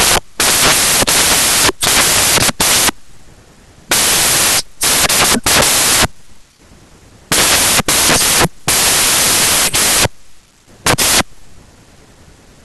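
The reader assembles every sample from the wrong bytes, so low-order bits dominate, and the speech comes through as loud, harsh broadband noise throughout.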